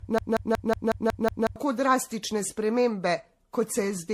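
A short speech clip that opens in a broken-record loop: from 0.0 s to 1.56 s a fragment of about 183 ms repeats back to back, seven times, and the loop is already running when the clip begins. The repetition is exact, so this is most likely a stalled player, encoder or stream re-sending the last chunk it held, and the speech that belonged in that stretch is gone. Throughout the whole clip the sound is swirly, hollow and smeared, with blurred consonant attacks and nothing above 14.7 kHz. This is generation loss, likely from repeated MP3 decoding and re-encoding at a rate in the region of 64 kbit/s, perhaps around ten passes. Each pass requantises on a shifted frame grid, so noise and spectral holes accumulate well beyond what that bitrate would produce in a single encode.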